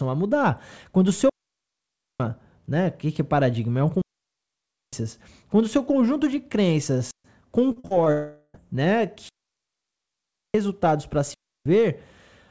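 Digital wireless dropout at 1.29 s, right after "o seu", again at 4.02 s and 7.11 s: the receiver lost too much of its data stream and muted, leaving clean holes of near silence, about 0.91 s, 0.91 s and 0.13 s long, with no noise burst on either side.

Repeated packet loss (robotic sound) from 7.72 to 8.08 s: four gaps arrive in quick succession, the longest 46 ms, and each is patched by stretching the preceding sound. About 39% of the span is concealed this way, so the audio turns choppy, with about 0.14 s actually missing.

Long network dropout from 8.12 to 8.56 s: the sound smears into a fading buzz or hiss for roughly 0.42 s, then falls silent for about 10 ms before resuming. The likely cause is that no packets arrived for that stretch, so the receiver extended the last sound while the real content was lost.

Digital wireless dropout returns at 9.29 s, a mute of about 1.26 s that ends just before "para se", and at 11.34 s, right after "para se", lasting about 0.32 s. 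Both are the same clean, noiseless cuts as before. Throughout, the band stops at 8 kHz, which fits a wideband call codec such as G.722.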